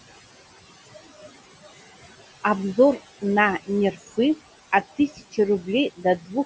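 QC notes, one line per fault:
Throughout, noise suppressor artifacts: the suppressor tracks the steady room noise frame by frame and lowers each band it judges to be noise by about 17 dB. The background, which sits roughly 17 dB under the speech, sinks away in the pauses and comes back up underneath the speech. The gains keep shifting band by band.
4.97–5.38 s and 5.96–6.35 s, speech cut by the noise suppressor: in both spans the suppressor mistook quieter parts of the speech for noise and turned them down with the background, by about 17 dB at the deepest point. Around a fifth of a second is affected in each span. Soft consonants and trailing parts of syllables there sound swallowed or faint.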